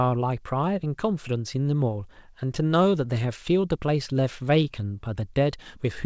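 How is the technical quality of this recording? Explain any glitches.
Two timing glitches break up the speech, both from the jitter buffer running short through a G.722 call path whose band stops at 8 kHz.

From 2.40 to 3.40 s there are repeated stalls (stutter): the jitter buffer emptied eight times, and each time the receiver stretched the last sound, 78 ms in all, with no gap longer than 13 ms. Nothing is lost, but the speech drags and hiccups. On a waveform the tiny held segments look like brief repeated stretches.

From 3.78 to 4.88 s comes a jitter buffer slow-down: the receiver rebuilt its reserve by repeating single pitch periods, adding 96 ms and playing at 92% speed. Pitch stays unchanged while sounds draw out. A spectrogram shows harmonics holding steady but stretched horizontally.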